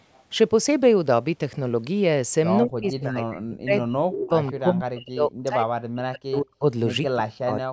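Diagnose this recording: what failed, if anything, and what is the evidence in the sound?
Speech suppressed in double talk, in call processing: level falls by about 40 dB at 2.63–4.32 s, 4.52–6.64 s and 7.03 s onward, leaving collapsed waveform envelopes and blank spectrogram gaps. This is likely echo-canceller ducking.

Echo leak, in call processing: at 4.47–4.52 s a faint copy arrives 172 ms late, about 25 dB down, showing as a ghost of the harmonics. This is likely loudspeaker echo the canceller missed.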